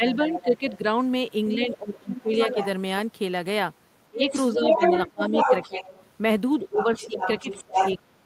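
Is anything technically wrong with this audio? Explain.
Yes. Speech suppressed in double talk at 0.0–0.98 s, 1.55–2.59 s, 4.1–5.82 s and 6.59 s to the end: the echo canceller likely mistook overlapping talk for echo, ducking the speech by about 10 dB, then 20, then 30.

The other side's voice leaks through at 0.13–0.71 s, 1.49–2.66 s, 4.23–6.06 s and 6.77–7.96 s, likely loudspeaker echo left uncancelled. It starts about 10 dB under the talker and later matches or exceeds it.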